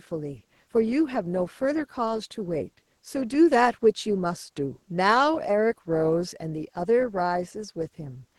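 No technical faults can be heard in the speech, which carries only the coding character expected of a call path.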